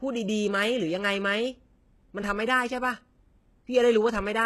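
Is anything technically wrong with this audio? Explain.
Yes. Throughout, the speech carries what is likely HE-AAC compression at a very low bitrate, around 16 kbps. Sibilants sound gritty and lispy, and nothing survives above 12.3 kHz. Unlike simple low-pass filtering, the treble below that edge is still bright but synthetic, rebuilt from copied lower bands with misaligned harmonics.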